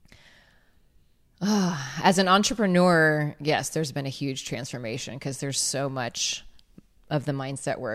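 Nothing in this recording calls for comment, since no technical faults turn up anywhere in it.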